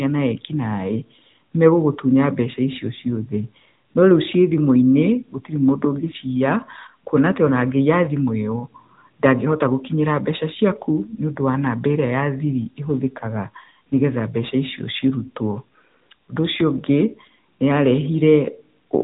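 From start to finish the speech carries the sound of the AMR narrowband mobile codec. Nothing above about 3.8 kHz survives, so the audio is dull and boxy, like a phone call. The codec rebuilds each short frame from a vocal-tract model driven by a few pulses, not from the original waveform. That leaves a plainly audible buzzy, synthetic edge. The degree of damage fits a mid-range AMR-NB bitrate of about 10.2 kbps.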